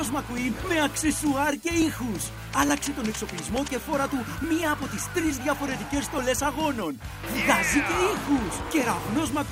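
From 0.95 to 8.81 s, a regular click recurs every 0.87 s, likely clock drift buffer slips, with a few dozen samples dropped or repeated at each slip.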